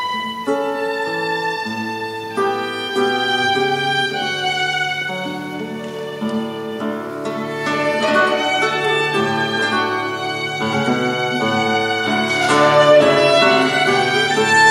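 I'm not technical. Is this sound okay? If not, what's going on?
Yes, this sound is okay, and nothing in it points to a technical problem. There are no dropouts, glitches or other faults to worry about.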